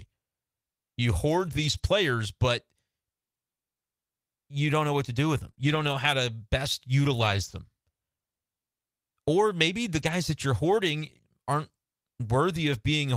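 Around 1.37 to 1.87 s the speech turns rougher and noisier. That's a lost packet rebuilt from error correction: packets went missing, but the following packets carried low-bitrate copies, and the decoder played those instead, so nothing drops out. It just sounds coarser for that stretch. The same thing comes back at 5.43 to 5.49 s and again at 5.59 to 6.13 s.

Sandwiched between those, at 5.51 to 5.55 s and 5.55 to 5.59 s, are two back-to-back cases of short concealed packet loss, each about 20 ms missing. No backup copy arrived in time, so the receiver extended the last sound, from its pitch if voiced or as shaped noise if not, and blended back into the real signal. You hear it as a quick smear or wobble, and a short consonant can get lost.

After that, the rebuilt-from-error-correction roughness shows up three more times, at 7.17 to 7.59 s, 9.99 to 10.17 s and 11.01 to 11.19 s.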